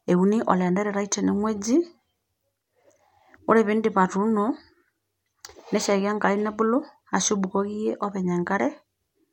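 No technical faults can be heard in this recording.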